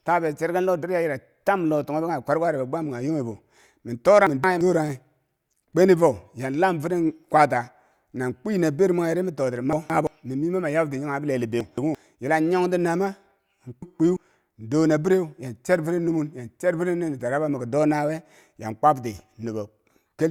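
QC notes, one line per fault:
4.27–4.61 s: chunks out of order. A 171 ms block plays one block late, swapping two adjacent segments, so the audio jumbles briefly at three hard joins.
9.73–10.07 s: chunks out of order, after "mwenghe ri mi totiri" and before "mi mii mama nyab". Same single-block swap of 171 ms blocks, heard as a scramble.
11.61–11.95 s: chunks out of order, after "nyab ti kanghe bileli" and before "yila yong ti naama". Same single-block swap of 171 ms blocks, heard as a scramble.
13.82–14.17 s: chunks out of order. Same single-block swap of 171 ms blocks; nothing is lost, but the reversed order and hard joins make a garbled moment.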